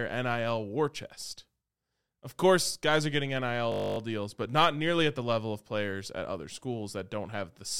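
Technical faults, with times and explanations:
3.72–3.98 s, system hang loop: the system stalled while the sound hardware replayed one 20 ms slice of buffer 13 times, producing a steady 50 Hz buzz. The waveform shows identical repeating cycles, and the spectrogram shows evenly spaced harmonics 50 Hz apart.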